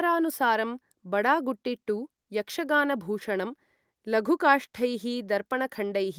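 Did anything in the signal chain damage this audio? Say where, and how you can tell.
No, nothing along the chain has left a mark I can hear on this speech, so there's no stage to point at and no damage to explain.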